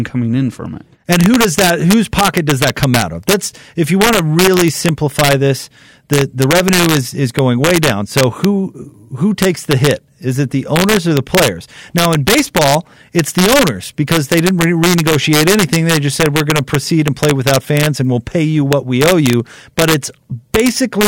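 Speech with integer overflow throughout: about 3 dB of overdrive wraps a small fraction of loud peaks to the opposite sign, giving violent cracks far sharper than clipping's flattened buzz.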